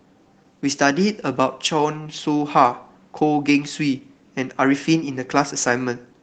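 Nothing in this speech recording stood out as a technical fault on listening.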